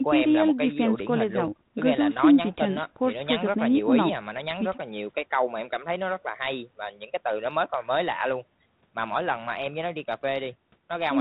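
The speech in this clip shows no technical fault. It passes through a G.726 ADPCM path at 32 kbit/s, which caps the bandwidth at 4 kHz and leaves only light coding texture on the speech.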